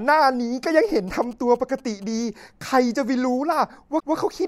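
From 0.84 to 2.04 s, GSM signalling bursts ride under the speech: a galloping dit-dit-dit of brief buzzes at a 217 Hz repetition rate, sitting roughly 25 dB below the voice. A nearby 2G phone is signalling rather than carrying a call, and the audio circuitry rectifies its radio pulses. What separates this from mains hum or a ground loop is the grouping. Hum is a steady drone, while this interference comes in irregular clusters that start and stop.

At 3.99 s the sound stutters. Repeated frames replay a 157 ms block once more before playback moves on at 4.14 s, so the clip runs 157 ms longer than it should. The block length fits a run of about six compressed frames being written or sent twice. A dropout or packet loss would leave a gap or a smeared concealment. Here the same fragment is heard again intact.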